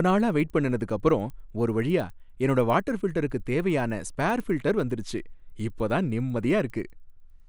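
Throughout, the resampler restarted on every block, converting each 100 ms block from 24 kHz to 48 kHz without its neighbours' samples, so every block edge carries a small error. The speech carries a regular tick at 10 Hz, present only while sound is playing.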